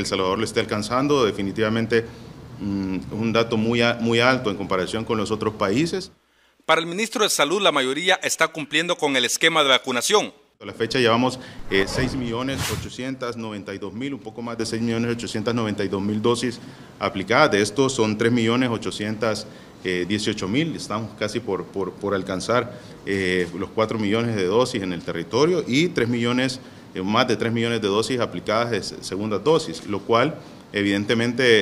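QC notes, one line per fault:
11.83 to 14.60 s, sudden gain jump: the level drops by about 8 dB from one sample to the next, background noise going down with it, then snaps back at 14.60 s. Likely a gain setting applied with no ramp, so nothing eases the step.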